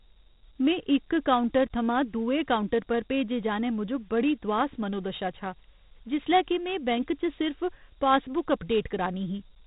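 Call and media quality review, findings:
Dialogic VOX ADPCM, throughout. Gritty, granular hiss riding on the speech, rising and falling with it; band cut off, nothing above 3.8 kHz. Probable component: telephony/IVR storage path. Each sample is coded as a coarse 4-bit step from a running prediction, so quantisation error tracks the signal. 32 kbps points to 8 kHz sampling, which caps the bandwidth near 4 kHz.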